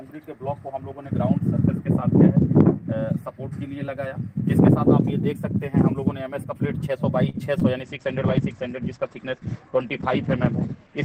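A short stall from a late packet occurs at 7.29 to 7.46 s. A packet arrived late, the jitter buffer ran dry, and the receiver held the last sound for about 45 ms until it came, then resumed where it left off. Nothing is lost, but the sound hangs slightly too long, with a faint buzz or dip.

Short concealed packet loss follows at 7.59 to 7.63 s. About 20 ms of audio never reached the decoder in time, and the receiver covered the gap by extending the preceding sound before blending back into the real signal. It comes across as a brief smear or wobble.

A call bitrate drop begins at 7.83 s and lasts to the end. The encoder was pushed to far fewer bits, which fits a fall from around 32 to 12 kbps, and the top end is cut off above 8 kHz. From there the sound is rougher, watery and muffled.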